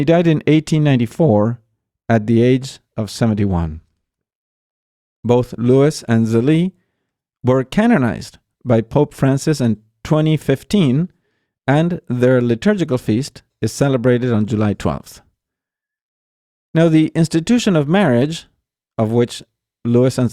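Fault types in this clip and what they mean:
Nothing stands out here at all; the speech just rolls along without a single glitch, dropout or odd artefact catching the ear.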